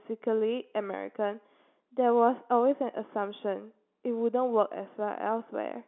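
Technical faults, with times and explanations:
No technical faults can be heard in this clip.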